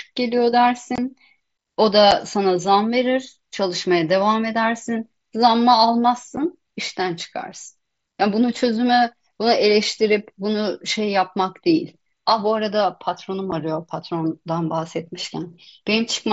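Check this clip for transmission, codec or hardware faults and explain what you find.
The speech shows one transmission fault, repeated four times, heard over a wideband mSBC headset link that passes sound up to 8 kHz with a light grain on loud passages.

Unconcealed Bluetooth headset packet loss occurs at 0.96 to 0.98 s (a 22.5 ms gap, which fits about three lost headset frames) and at 2.11, 6.36 and 13.51 s (single brief dropouts of about 7.5 ms each). The missing voice data wasn't patched over, so silence or an idle pattern fills each hole, leaving abrupt breaks in the speech.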